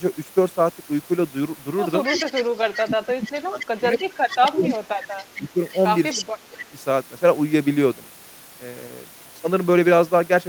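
Echo leak starts at 2.04 s and runs to 2.79 s: a copy of the speech returns 259 ms late and only a little quieter than the original. The far end is most likely playing the call on a loudspeaker, and its echo canceller is not removing everything its microphone picks up, so the residue is sent back.

Speech suppressed in double talk follows from 2.44 to 4.04 s. While both sides talk, the talker's level dips by as much as about 25 dB. The likely cause is a canceller that cannot tell local speech from loudspeaker echo and turns both down.

The echo returns from 3.26 to 4.76 s, weaker, with the same 259 ms delay. Suppression hits again from 4.38 to 5.6 s, dropping the level by up to about 30 dB. A faint echo trace sits at 5.19 to 5.79 s. A short, strong burst of echo at 6.11 to 6.25 s overlaps a final dip of about 25 dB from 6.16 to 6.77 s.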